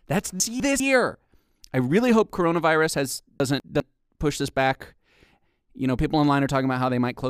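A jumbled stutter hits the speech at 0.4 to 0.8 s and again at 3.4 to 3.8 s, after "really hope coronavirus has" and before "push this back". These are chunks out of order: a 200 ms chunk arrives one chunk late and plays after its successor, leaving three hard joins.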